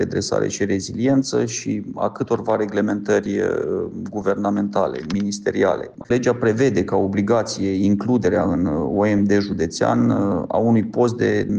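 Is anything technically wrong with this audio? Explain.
No, nothing technically wrong can be heard in this audio, and the signal stays intact and undisturbed throughout.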